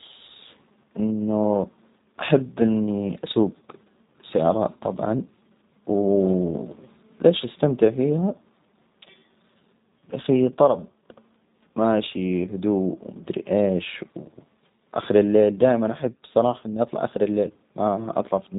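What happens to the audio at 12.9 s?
At 12.9 s the speech carries G.729 codec damage, as it does across the whole clip. The sound is rebuilt from a vocal-tract filter, pitch predictor and sparse pulses, which fits an 8 kbit/s stream, so it sounds rough and synthetic. A spectrogram shows a hard ceiling with nothing above 3.8 kHz.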